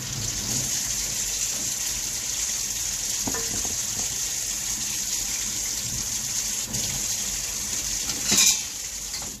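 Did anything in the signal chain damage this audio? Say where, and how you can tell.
Yes. Crude rate conversion at the sample-format conversion stage damaged the audio throughout. A gritty, inharmonic fizz, roughly 15 dB below the signal, tracks the loud and bright sounds. That fits linear interpolation from 32 kHz to 48 kHz without filtering, which leaves patterned error tones.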